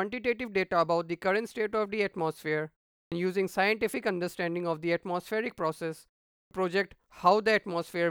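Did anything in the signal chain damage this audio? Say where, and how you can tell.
Yes: a clipped start after a pause at playback. Speech resuming at 3.04 s and 6.43 s loses its first 77 and 80 ms while the idle output device wakes.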